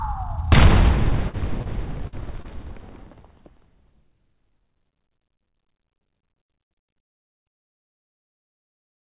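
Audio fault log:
1.10 to 3.28 s, short concealed packet loss, at 1.10–1.13, 1.29–1.35, 1.61–1.67, 2.42–2.46, 3.12–3.15 and 3.25–3.28 s: pieces of the sound, 20 to 40 ms each, arrived too late or not at all. Each time the receiver extended the sound just before the gap, as a pitched continuation or as shaped noise, for 10 to 41 ms, then cross-faded back. In the 4 kHz-limited band of this G.711-style call path, these show up as brief smears or wobbles.
2.07 to 2.14 s, burst of packet loss: about 40 ms of consecutive audio went missing. The receiver bridged the hole by continuing the last sound for 49 ms and turning it down as the gap went on, so a tonal part becomes a short held buzz and a noisy one a fading hiss. The sound then picks up further along, with the material in between gone rather than delayed.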